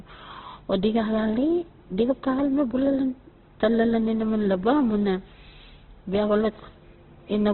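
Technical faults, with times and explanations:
throughout: Opus compression. The speech sounds rough and grainy, with a noisy texture replacing clean tone, and nothing above 4.2 kHz, so sibilants and breath detail are gone and the sound is squeezed into a narrow, telephone-like band. The cause is likely heavy Opus coding in its music (CELT) mode at a rate that fits about 12 kbps. Band energies survive, but their fine detail is filled with folded or noise content, and the bandwidth is cut to narrowband.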